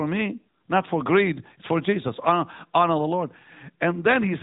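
Throughout the speech, AMR narrowband mobile codec damage is plainly audible: a buzzy, synthetic voice, fitting a rate near 10 kbps. A spectrogram shows everything above 3.8 kHz cut away.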